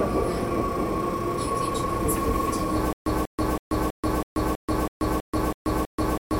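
From 2.93 s to the end, a stutter with silent gaps sets in. A 191 ms fragment repeats ten times, each followed by about 134 ms of digital silence, a 325 ms cycle, likely from a stalled stream. The waveform shows identical blocks separated by flat silence, and the spectrogram shows copied slices between blank columns.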